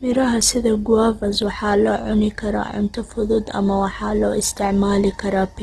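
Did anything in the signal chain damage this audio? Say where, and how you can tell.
Yes. Throughout the speech, vowel tones sound grainy, rough and noisy, and nothing reaches above 12.1 kHz. The stage is the codec, likely Opus compression in its CELT mode: starved of bits, it fills bands with folded or noise content, which fits a rate near 16 kbps.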